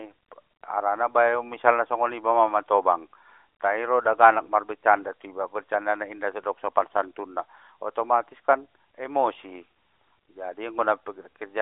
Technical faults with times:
none

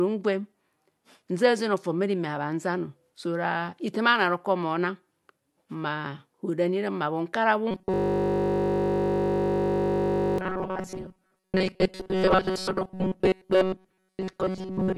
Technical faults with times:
7.71-14.97 robotic sound from repeated short buffers
7.94-10.38 system hang loop

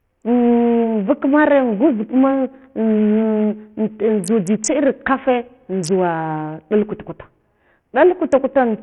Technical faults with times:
0.00-8.82 Bluetooth SBC compression

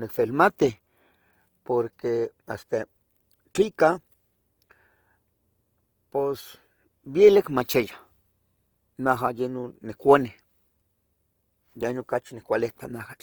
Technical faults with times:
0.00-13.22 Opus compression

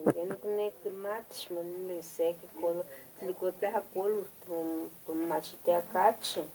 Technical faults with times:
0.47-2.91 automatic gain rising
3.59-5.95 automatic gain rising

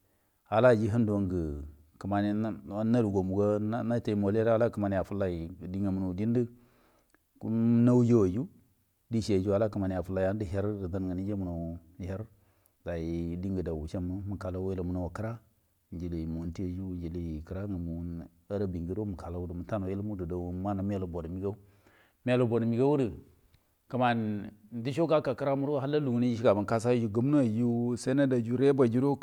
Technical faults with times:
none

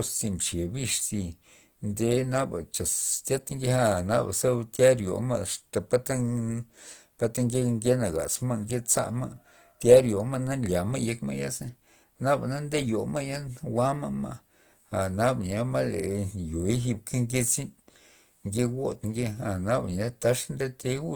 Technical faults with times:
0.00-21.15 Opus compression

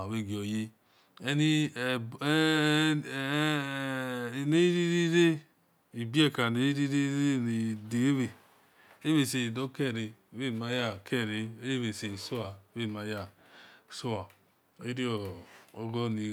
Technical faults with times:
none

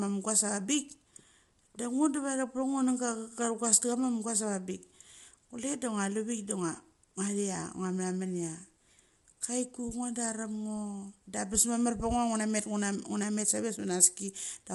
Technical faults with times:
0.00-14.75 low-delay AAC compression

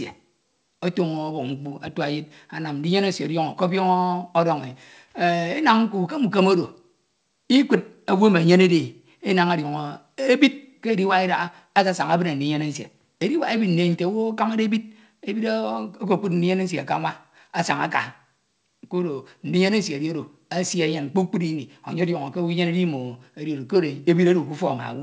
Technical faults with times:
none

